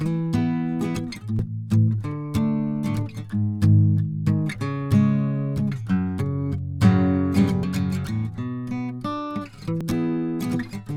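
At 1.39 s, 7.63 s and 9.81 s the music is interrupted by a very brief chirp or blip, each only a few milliseconds long. These are damaged data in a compressed stream. At each point some bytes of the encoded file are corrupted, so the decoder misreads the affected frame, loses sync and briefly outputs garbage before it locks onto the next valid frame header and resumes normal decoding.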